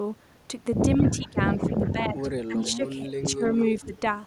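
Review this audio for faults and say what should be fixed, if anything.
The speech gets suppressed in double talk from 0.98 to 1.38 s and again from 1.69 to 3.44 s. The voice dips by as much as about 15 dB in patches, likely because the echo canceller couldn't separate it from far-end audio and ducked everything. Tuning the canceller's double-talk detector so it holds near-end speech open would prevent this.

There's also echo leak at 1.07–1.29, 1.6–1.92, 2.64–2.72 and 3.45–4.0 s. A copy delayed by 194 ms comes through at about 15 to 25 dB below the speech, likely from a loudspeaker whose echo canceller didn't fully remove it. Better loudspeaker placement or a longer canceller filter would help.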